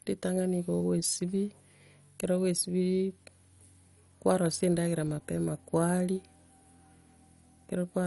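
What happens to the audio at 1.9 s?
At 1.9 s the speech carries MP2 compression damage, present across the whole clip rather than only at that moment. It sounds dull, with a gurgling, granular roughness, likely from MPEG Layer II coding starved of bits, which fits a rate around 48 kbps. Upper sub-bands drop out, so a spectrogram shows nothing above 11.3 kHz, with blocky patches flickering in and out below that edge where the remaining bands are coarsely quantised.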